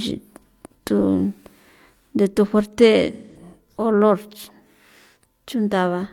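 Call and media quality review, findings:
AAC frame loss with concealment, 3.12–3.37 s, just after "de thu fuerte": decoder rebuilt missing audio from last good spectrum, leaving a smeared, noisy patch; gap fits about four lost frames.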